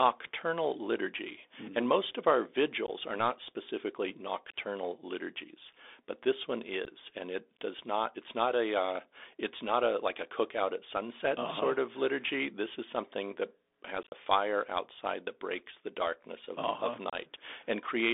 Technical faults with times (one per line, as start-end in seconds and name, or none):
0.00-18.14 Bluetooth CVSD headset codec
2.87-2.90 unconcealed Bluetooth headset packet loss
6.85 unconcealed Bluetooth headset packet loss
14.03-14.13 unconcealed Bluetooth headset packet loss
17.10-17.15 unconcealed Bluetooth headset packet loss